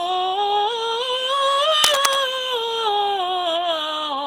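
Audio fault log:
Throughout: generation loss. The music sounds swirly, smeared and hollow, with blurred attacks, which is likely the result of roughly seven successive Opus encodes at 64 kbit/s. Each pass quantises the sound again on a shifted frame grid, so noise and spectral gaps pile up. The damage is well beyond what a single 64 kbit/s Opus pass would leave. That excess, spread evenly over the whole clip, is what separates it from an ordinary low-bitrate encode.
1.84–2.16 s: cable scratch noise. A dense, irregular burst of scratching and rustling sits over the music for about a third of a second, at roughly the same loudness as the music itself. This likely comes from a worn cable, connector or control being moved, so that its contact resistance flickers rapidly. Unlike isolated clicks or a dropout, the noise is a continuous rough texture added on top, and the music carries on beneath it.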